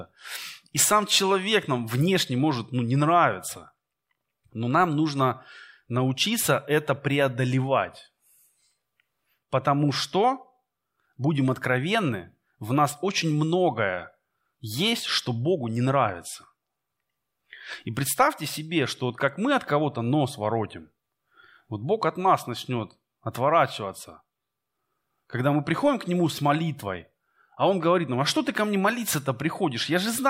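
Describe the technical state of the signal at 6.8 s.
At 6.8 s the speech signal is intact, with no audible fault at that point.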